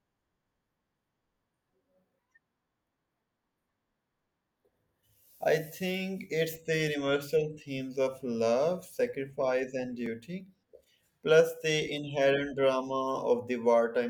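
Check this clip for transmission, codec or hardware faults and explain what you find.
One fault stands out in this speech clip: a block of digital silence at 10.06 s. For about 2.9 ms the signal drops to silence and then resumes, with no fade on either side. A gap this short fits a single 128-sample buffer that the audio program failed to fill in time. It is heard as a brief tick rather than a hole. The waveform shows a flat line at zero bounded by two abrupt steps, and the spectrogram shows a thin vertical broadband stripe.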